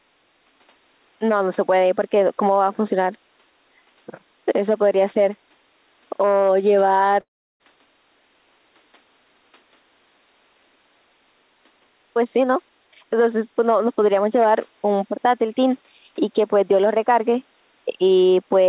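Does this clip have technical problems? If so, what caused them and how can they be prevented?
Yes. At 7.2 s the speech cuts out in a long network dropout that lasts until about 7.63 s. The receiver carries the last sound on as a buzz or hiss that fades away. Near silence then holds for about 0.35 s. About 0.4 s of audio never arrives, so the speech resumes past the missing part. The likely cause is packet loss on the call's network link. A stable connection with enough bandwidth, such as a wired link, would prevent it.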